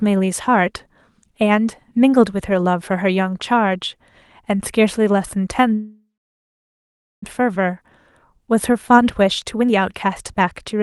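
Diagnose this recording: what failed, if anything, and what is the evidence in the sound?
Network stage: a long network dropout, 5.73 to 7.28 s. The sound decays into about 1.2 s of silence, and roughly a second of speech is missing, likely from lost packets.

Jitter buffer: from 8.34 to 10.81 s the speech runs about 10% fast at unchanged pitch. This jitter buffer speed-up trims pitch periods to shed roughly 0.3 s of backlog.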